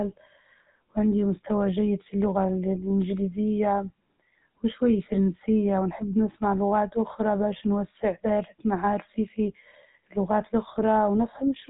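From start to end, the speech carries GSM full-rate codec damage: a plainly audible buzzy, gravelly roughness from pulse-train excitation, consistent with the 13 kbps full-rate mode. A spectrogram shows nothing above 3.8 kHz, with coarse, regularly striated harmonics below.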